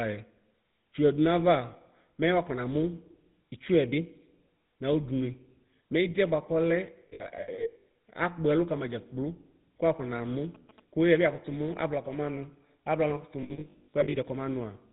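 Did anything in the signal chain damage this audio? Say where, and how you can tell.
Yes. The speech sounds buzzy and gravelly throughout, with nothing above 4 kHz. That points to the codec stage, specifically the GSM full-rate codec at 13 kbps. It rebuilds the vocal tract from a sparse, regularly pulsed excitation, so the roughness is plainly audible.

From 7.08 to 7.84 s and again from 13.42 to 14.16 s, the speech turns into a rough, metallic ring. These are lost GSM frames in the network. About 420 ms and 460 ms of audio went missing, scattered in runs of up to about 70 ms. The decoder filled each gap by repeating the last good frame.

Between 10.55 and 12.12 s there is a galloping dit-dit-dit of short buzzes at 217 Hz, about 25 dB below the speech. These are GSM signalling bursts from a nearby 2G phone. The analogue wiring picked up its radio transmissions and rectified them into audible sound.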